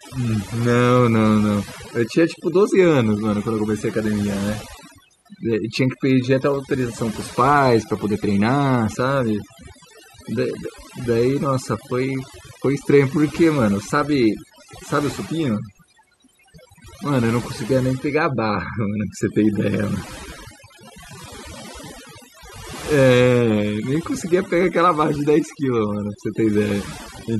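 Right through the clip there's overdone noise removal: the reducer was pushed so hard it's gouging out quiet speech bands, leaving twinkly near-silence between phrases.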